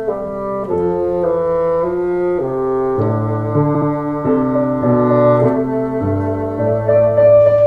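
A music clip with repeated frames at 3.74–3.88 s: a 70 ms block of compressed audio plays twice more, stuttering and adding about 140 ms, which fits a short run of frames being duplicated. Unlike a dropout, nothing is lost; identical material recurs.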